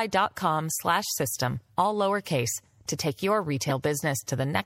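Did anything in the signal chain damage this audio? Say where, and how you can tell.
Yes. Throughout, the speech sounds watery and swirly, with dulled treble and smeared attacks, likely MP3 compression at a low bitrate around 64 kbps starving the codec stage.

Just after "lowercase to take your", a brief glitch peaks at about -10 dBFS from 3.69 to 3.71 s. That is a corrupt frame decoded: a single damaged frame played anyway, misplacing energy in frequency.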